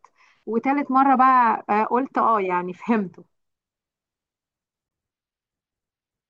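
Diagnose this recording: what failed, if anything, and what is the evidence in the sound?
At 4.89 s the speech jumps ahead, with a brief glitch at the splice. The codec stage is at fault, likely a broken MP3 bit reservoir. Frames were lost, so the next frame decoded borrowed bytes from the wrong frame. The frames are 24 ms long.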